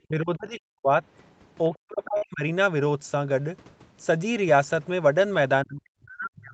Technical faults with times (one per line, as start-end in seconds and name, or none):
0.02-0.91 speech suppressed in double talk
1.70-2.43 speech suppressed in double talk
2.17-2.25 short stall from a late packet
5.64-6.53 speech suppressed in double talk